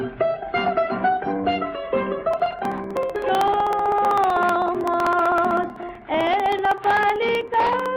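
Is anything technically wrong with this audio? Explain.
Yes. From 2.34 s to 7.86 s there are periodic USB or driver dropouts: every 63.5 ms a sliver of roughly half a millisecond is skipped as something blocks the driver, about a hundred times. It sounds like steady ticking, and the waveform shows regularly spaced splice discontinuities with vertical lines on the spectrogram.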